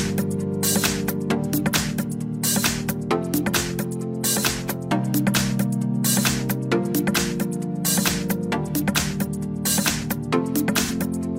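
Near the end of the audio, from 10.84 to 10.91 s, there is a brief smeared, noisy patch lasting about 43 ms. It is AAC frame loss with concealment. The decoder lost a chunk of the stream and filled the gap with a guess built from the last good spectrum. The result sounds blurred and phasey rather than silent. The gap is short enough to fit a single lost frame, so there is no fade to silence.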